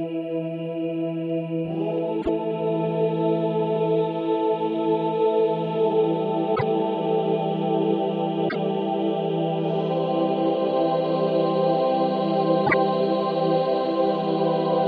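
At 2.21 to 2.29 s, 6.55 to 6.63 s, 8.48 to 8.56 s and 12.66 to 12.74 s the sound skips ahead and each jump is followed by roughly 80 ms of garbled decoding, a chirp, a burst of noise or a short hole, about three 26.1 ms frames, a likely sign of a broken MP3 bit reservoir. After a cut, frames reach back for borrowed data and decode the wrong bytes. Unlike a plain dropout, the audio jumps forward and the first frames after the cut come out garbled.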